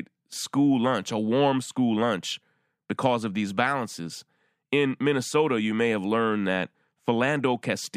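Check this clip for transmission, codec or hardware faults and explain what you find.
Nothing in the speech indicates a transmission, codec or hardware problem.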